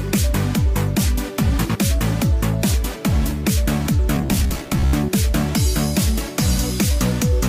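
From 4.15 to 4.93 s, robotic sound from repeated short buffers: a rigid metallic 66.7 Hz buzz, likely from 15 ms chunks looping, showing as identical repeating waveform cycles.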